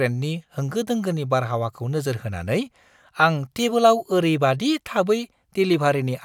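No technical faults can be heard anywhere in this speech recording. There is nothing in the audio that needs a timestamp or a description.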